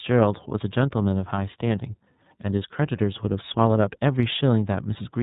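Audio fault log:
throughout: iLBC codec. The speech sounds plainly rough and synthetic, with its excitation coded frame by frame, fitting 30 ms frames. The spectrogram is empty above 4 kHz.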